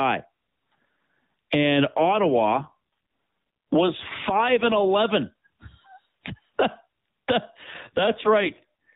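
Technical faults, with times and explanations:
1.88–4.97 s and 7.64 s to the end, AMR rate drops: the light AMR-NB sound turns rougher and buzzier, which fits a step down from 12.2 to 5.9 kbps. Fewer bits leave a cruder vocal-tract model. On a spectrogram the 4 kHz ceiling stays, harmonics smear, and the waveform shows no gap.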